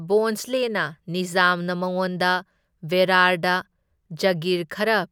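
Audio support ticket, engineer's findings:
No faults found in recording.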